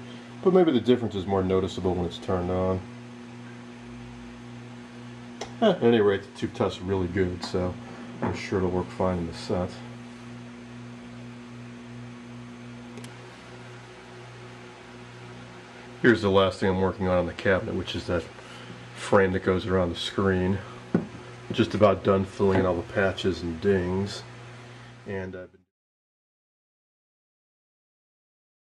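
Nothing stood out on listening; the sound simply fades out smoothly near the end, from about 24.5 s to 25.72 s.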